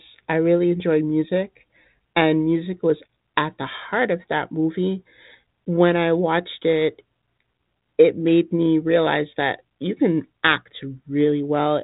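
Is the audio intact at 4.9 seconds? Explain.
Yes, the audio is intact at 4.9 seconds, with only the G.726 ADPCM telephone coding at 32 kbit/s heard as a light band limit at about 3.8 kHz.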